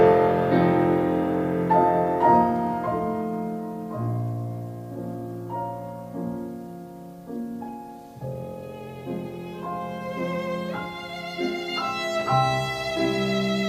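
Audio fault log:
No faults are audible anywhere in this recording.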